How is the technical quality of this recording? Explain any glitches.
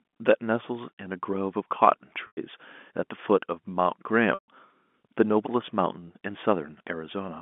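There are two dropouts, both from packet loss with pitch repetition. The call runs through G.711 telephone coding, so it's band-limited to about 200 Hz to 3.5 kHz.

The dropouts sit at 2.27 to 2.37 s (100 ms lost) and 4.34 to 4.48 s (140 ms lost). The receiver bridged each gap by looping the last pitch period and fading it over roughly 50 ms, so you hear a brief buzzy hold that sinks into silence before the speech cross-fades back in. The loss per gap fits about 10 ms packets.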